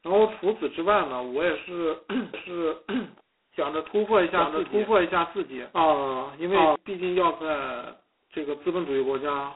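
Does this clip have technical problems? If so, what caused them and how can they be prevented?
Yes. The whole clip has heavy G.726 ADPCM damage. Speech is squeezed into a narrow phone band with nothing above about 3.9 kHz, and a harsh, rasping hiss rides on its level, which fits 16 kbit/s coding. To prevent it, run the link at 32 kbit/s or use a wideband codec.

From 2.34 to 6.76 s there's a doubled audio track. A dry, full-band copy at about the same level trails roughly 0.7 s behind, starting and stopping abruptly, likely from a second, slower capture path being mixed in. To prevent it, mute or route out the duplicate path so only one feed reaches the mix.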